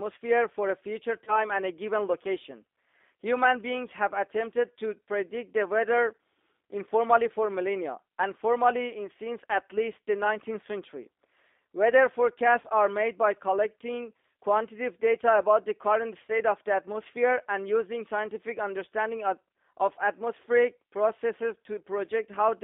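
Throughout the speech, the G.729 codec (G.729A, 8 kbit/s) confines the sound to a line band of roughly 250 Hz to 3.6 kHz and gives it a plainly audible rough, synthetic texture. Unlike simple band-limiting, which only muffles, the codec rebuilds each frame from a filter, pitch and a few pulses, and that is what makes it sound grainy.

VoIP packet loss concealed by the speech codec occurs at 1.24–1.44 s, 12.61–12.67 s and 16.25–16.32 s. Each event fits a single lost 30 ms packet. The decoder stretches the last pitch and filter into a fading buzzy tone or coloured noise rather than leaving a silent gap or click. At 1.24 s the weakened, distorted sound lasts about 0.2 s, well beyond the loss itself.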